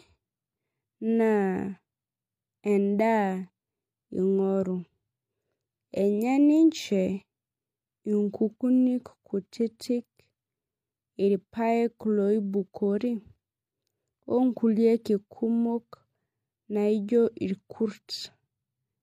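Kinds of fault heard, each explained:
No audible faults detected.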